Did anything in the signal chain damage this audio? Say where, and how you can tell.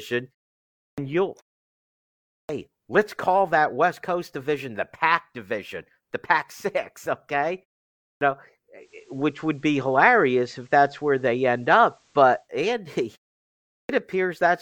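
Yes. The playback device shows a clipped start after a pause at 0.89, 2.4, 8.12 and 13.81 s. Each onset loses about 82 to 92 ms after silences of 0.55 to 1.07 s, so the output is sleeping in the gaps and waking late.

Further up, at the radio receiver, there is digital radio blending to analogue from 8.77 to 12.49 s. A 141 ms cross-fade brings in the FM feed. The level shifts by about 4 dB, and hiss sits roughly 40 dB below the signal until it blends back.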